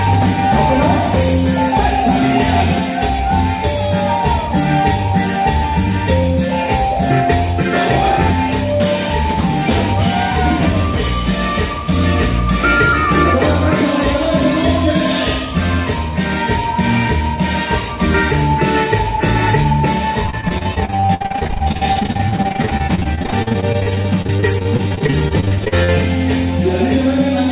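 From 20.26 to 25.9 s the audio breaks up into choppy, robotic-sounding fragments: repeated packet loss. Packets keep arriving late or not at all, and each hole is bridged by extending the last received sound before the next dropout follows, with the longest gaps near 60 ms. Close to a third of that stretch is patched material. Beneath the dropouts, the call path carries nothing above 4 kHz.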